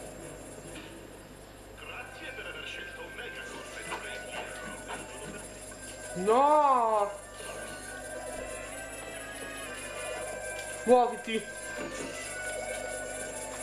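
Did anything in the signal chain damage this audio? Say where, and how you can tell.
Yes: a drift correction step from 8.72 to 9.66 s, where speed rises 5.57% and pitch about 94 cents, then snaps back, likely a buffer-stage clock-matching rate jump.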